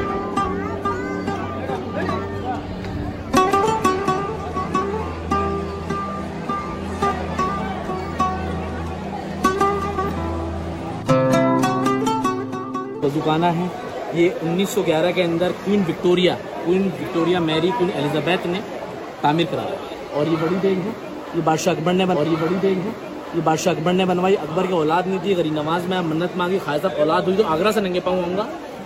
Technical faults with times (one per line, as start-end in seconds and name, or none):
22.11-24.11 stream segment repeated